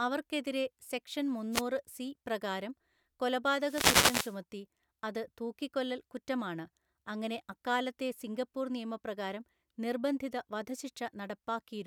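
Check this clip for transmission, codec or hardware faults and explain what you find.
Two wireless microphone noise hits disturb the speech, both from an analogue FM radio link losing signal strength.

From 1.52 to 1.62 s, just after "അവർക്കെതിരെ സെക്ഷൻ" and before "സി പ്രകാരം", and again from 3.59 to 4.39 s, the transmitted signal fades as reflections cancel. Receiver noise swells through, heard as a brief swish of static, with the second hit lasting longer.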